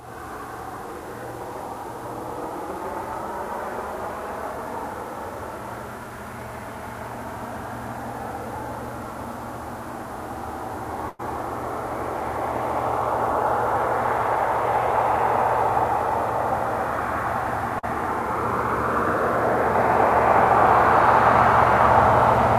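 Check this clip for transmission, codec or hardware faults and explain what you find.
Two transmission faults are present, both caused by packets that arrived too late or not at all.

Burst of packet loss, 11.09 to 11.21 s: about 100 ms of audio never arrived. The receiver extended the last sound for roughly 94 ms, fading it down, so a held buzz or dying hiss replaces the lost stretch before the audio picks up further along.

Short concealed packet loss, 17.79 to 17.85 s: about 40 ms went missing. The decoder patched the hole by continuing the preceding sound and blending back into the real signal, which leaves a brief smear or wobble, and a short transient there can disappear.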